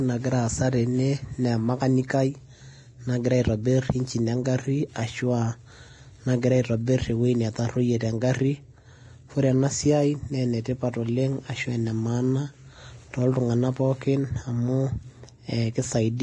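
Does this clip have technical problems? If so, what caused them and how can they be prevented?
Yes. Throughout, the speech sounds hissy and grainy, with nothing above 10.6 kHz, which points to heavy Vorbis compression at a low bitrate of around 31 kbps. To prevent it, encode at a higher quality setting.

From 2.07 to 2.10 s there's pre-echo: quantisation noise smeared across the transform block leaves about 26 ms of hiss ahead of a sharp attack. A higher bitrate or shorter transform blocks would prevent it.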